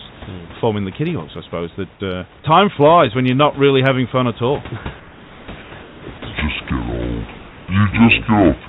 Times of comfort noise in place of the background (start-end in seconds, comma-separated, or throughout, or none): 5.00-6.02